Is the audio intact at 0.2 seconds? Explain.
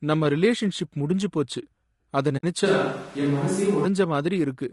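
No. At 0.2 seconds, as throughout the clip, the speech sounds rough and grainy, with noise filling the gaps between harmonics and a thin, synthetic top band. The likely cause is low-delay AAC compression at a low rate, around 32 kbps: it codes about 500 frequency lines a frame with a low-delay window, and at this rate the coarse coding leaves noise between the harmonics.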